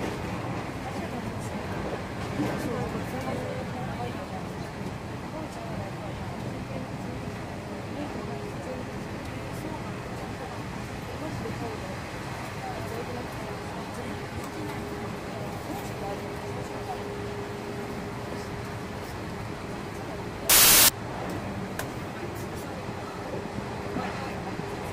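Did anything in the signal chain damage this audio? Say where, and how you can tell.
Yes. From 20.50 to 20.89 s the sound turns into loud, harsh broadband noise for about 0.39 s. That points to samples built from the wrong bytes at the sample-format conversion stage. Misaligned or swapped bytes push the fast-changing low bits into each sample's top.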